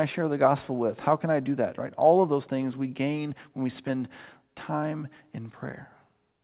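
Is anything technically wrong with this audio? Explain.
No, nothing is technically wrong.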